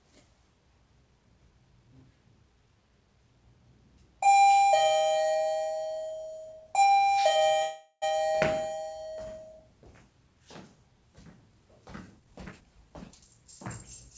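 A recording of everyday sounds carried over a call link, with the band ending at 8 kHz, which fits G.722 at 64 kbps, and two timing faults. From 7.62 to 8.04 s there is a call audio freeze. The last sound is carried on as a fading buzz or hiss that ends in about 50 ms of silence, and the audio then resumes where it left off. This is likely packets held up in transit while the jitter buffer ran dry. The roughly 0.4 s gap is inserted rather than replacing anything, so no content is lost, but the playout delay grows by 399 ms. From 12.19 to 13.42 s a jitter buffer speed-up follows. The receiver drains the excess backlog by repeatedly cutting out short pitch-period slices, removing roughly 0.3 s in total. The sound runs at about 125% speed with its pitch unchanged and comes across as noticeably hurried.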